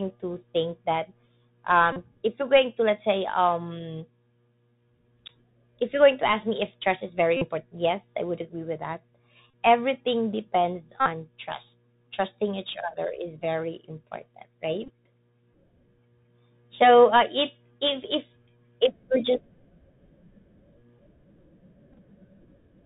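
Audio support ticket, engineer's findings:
Bluetooth CVSD headset codec, whole clip. Hard narrowband ceiling, nothing above 4 kHz. Sibilants scratchy. Granular hiss under the speech. Loud bright passages distort. Damage plainly audible. Probable component: headset voice link, fitting a 64 kbit/s CVSD stream. Mechanism: one-bit up/down coder, adaptive step too slow for fast high-frequency swings.

Bluetooth headset packet repeated, six events. Symptom: short buzz near 267 Hz, stale audio replayed every 3.75 ms.
1.92–1.97 s, about 38 ms lost.
7.37–7.48 s, after "if trust is very", before "yes i would agree", 45 ms lost.
9.50–9.53 s, after "would agree with that", before "everything depends", 30 ms lost.
11.00–11.09 s, after "everything depends", before "trust trusting each other", 56 ms lost.
14.84–14.90 s, about 34 ms lost, scattered over 45 ms. Longest run roughly 15 ms.
21.93–21.99 s, 30 ms lost, scattered over 60 ms. 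Only brief runs, ticky.
Probable component: headset radio link. Mechanism: lost packets, decoder replays the previous packet's bits.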